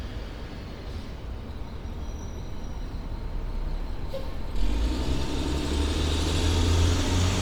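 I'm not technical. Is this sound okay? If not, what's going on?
No. Bluetooth LC3 compression is audible from start to finish, giving the sound a grainy, breathy edge. It's likely from a Bluetooth link, which cuts the audio into 10 ms slices, discards fine upper detail, and fills the gaps with noise.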